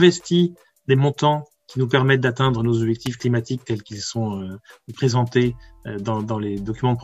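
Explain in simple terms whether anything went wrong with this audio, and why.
Something nearby most likely switched on or off at about 3.06 s, such as a switch, a motor or a spark of static, and the audio cable picked up that brief electrical jolt. This is called an electrical switching spike. You hear it as a sharp snap or a tight cluster of clicks, lasting only a split second, that sits on top of the sound rather than coming from it.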